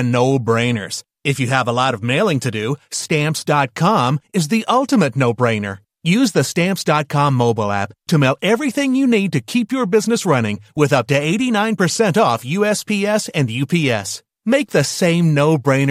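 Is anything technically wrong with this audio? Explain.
No, nothing technically wrong stood out on listening to this speech recording.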